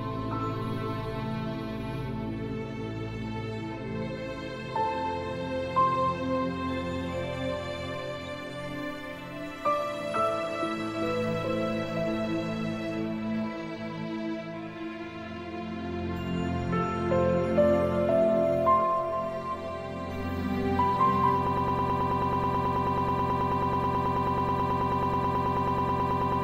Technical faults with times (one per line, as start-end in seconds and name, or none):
8.26 corrupt frame decoded
21.47-26.43 broken-record loop